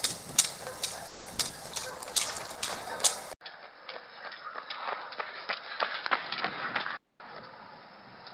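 At 1.07 s the sound stalls and gets stretched into a fading buzzy continuation until about 1.28 s. That's a call audio freeze, likely packets held up in transit while the jitter buffer ran dry. Roughly 190 ms of filler gets inserted, and then the audio picks up right where it left off, with nothing actually lost.

Right after, at 1.34 s and again at 1.37 s, there are two quick smears. That's short concealed packet loss. Each time a few hundredths of a second didn't reach the decoder, so the receiver extrapolated from the preceding sound and crossfaded back into the real signal.

At 1.48 s there's a skip ahead. Playback jumps forward with barely any gap, dropping something under a tenth of a second. Audio was already queued behind the hole, so the two edges get butted together almost directly, which sounds like a tiny lurch.

From 1.65 s to about 2.90 s a call bitrate drop kicks in. The encoder falls from 32 to 17 kbps and sits at the bottom for about 1.1 s. 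The coarser coding makes things sound rough and watery, with the top end thinned out, until the rate climbs back.

Overlapping that, from 1.80 to 2.36 s, a jitter buffer slow-down stretches the audio to 87% speed by repeating single pitch periods over and over, adding about 82 ms. The pitch stays put, but things drag.

At 3.33 s there's an 80 ms dropout. From then to the end the sound is duller and boxier, with nothing above 5.3 kHz, about 10 dB quieter, and carrying a new noise floor roughly 35 dB down. That's the input switched to a poorer device, likely a change to a narrower-band microphone or a headset's call profile.

Finally, from 6.97 to 7.19 s, a jitter buffer speed-up trims short pitch-period chunks, about 70 ms in total, to shrink a backlog. Playback runs at 128% with the pitch unchanged, so that stretch comes across as noticeably hurried.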